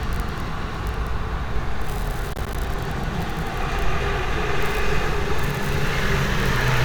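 At 0.42 to 0.48 s and again at 1.56 to 1.64 s, the sound briefly jumbles: chunks out of order. A 20 ms piece plays two, then three, slots late, so nothing goes missing. Unlike a dropout, there is no silence, only scrambled order and three hard joins each time.

From 2.33 to 2.55 s, the sound cuts out in several short holes totalling about 67 ms, the longest about 27 ms. This is likely a Bluetooth dropout. The sound resumes further along, as if it kept playing, rather than replaying material.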